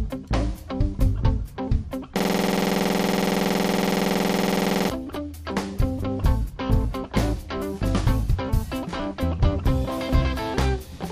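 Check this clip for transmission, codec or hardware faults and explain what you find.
One hardware-level fault is present: a system hang loop from 2.20 s to 4.90 s. The computer or its audio driver stalled while the sound hardware kept replaying its ring buffer. A 46.44 ms slice of audio repeats exactly, 58 times in a row. That length fits a 2048-sample buffer. The repeats arrive at 21.5 Hz, so the sound becomes a rapid, rattling buzz with a fixed pitch-like drone. Normal audio resumes at 4.90 s.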